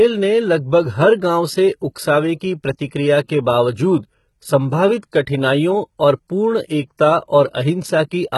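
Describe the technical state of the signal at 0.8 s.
At 0.8 s you're hearing the same heavy coding damage that runs through the whole speech clip, and it's most likely HE-AAC compression. The treble isn't the real signal. It's been rebuilt by copying lower bands upward under a coarse envelope, so harmonics don't line up and s sounds come out gritty and lispy. Everything stops at 11.8 kHz, which fits a very low bitrate, around 16 kbps.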